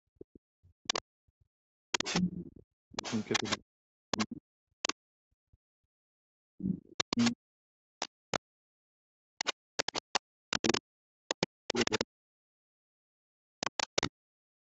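Speech suppressed in double talk runs from 0.06 s to the end at 14.7 s. The talker's level dips, at its deepest by roughly 40 dB, and the voice thins or breaks into fragments. The likely cause is an echo canceller that could not tell the near talker apart from loudspeaker echo while both were active, so it pulled everything down together rather than removing only the echo.

The other side's voice leaking through appears from 0.87 to 4.94 s, again from 6.87 to 8.39 s, from 9.38 to 12.05 s, and briefly from 13.6 to 14.08 s. A second talker sits only about 5 dB below the main speech. This is likely residual echo: the far end played on a loudspeaker was picked up by the microphone and not fully cancelled.

Background gated by the echo canceller follows at 4.94 to 5.06 s, right as the first stretch of leakage ends. The room sound drops by about 40 dB for roughly 100 ms, a brief hole in the ambience, before coming back. 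The canceller clamped the microphone hard while it judged loudspeaker output to be present, then released it. Throughout, the top end stops near 8 kHz, which fits Opus at around 32 kbps on a wideband call path.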